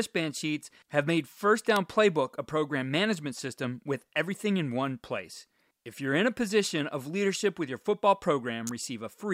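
At 1.76 s and again at 8.67 s, a sharp snap cuts across the speech, each lasting only milliseconds. These are electrical switching spikes, likely from a nearby switch or discharge arcing into the audio line. Each shows as a thin vertical stripe spanning all frequencies and a narrow spike on the waveform.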